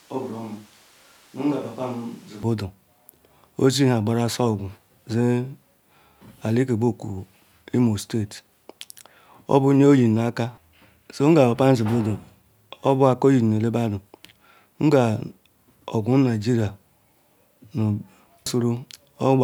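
From the start to 2.43 s the speech sounds roomy, hollow and thin, about 10 dB quieter and noisier, likely a switch to a distant microphone.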